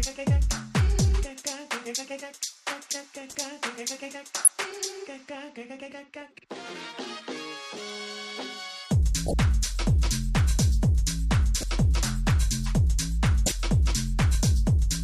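Five short chirps and noise bursts cut across the sound, at 3.30–3.35 s, 4.44–4.50 s, 9.27–9.34 s, 11.57–11.63 s and 13.46–13.52 s, each lasting roughly 55 to 70 ms. The ones at 4.44 s and 13.46 s are the loudest and most piercing, the one at 3.30 s the faintest. This is a corrupt frame decoded: flipped bits in a few compressed frames made the decoder misread gains and codes, briefly placing energy at the wrong frequencies.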